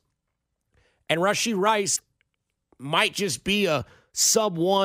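Speech runs cleanly until 1.95 s, where a short glitch lasting to 2.00 s breaks in: the audio skips forward and the next 55 ms or so, roughly two 26.1 ms frames, decode wrongly. That sound points to a likely broken MP3 bit reservoir, with frames missing and the following frames decoding borrowed bits from the wrong data. A spectrogram would show a brief break in the pattern, and the waveform a discontinuous jump there.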